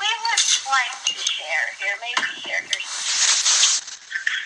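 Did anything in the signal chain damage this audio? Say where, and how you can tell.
Yes. A call bitrate drop hits the codec stage from 3.07 s to the end. The top end collapses from 20 kHz to an 8 kHz ceiling and the sound turns coarse and muffled for about 1.34 s, which fits the encoder falling from roughly 128 kbps to around 9 kbps.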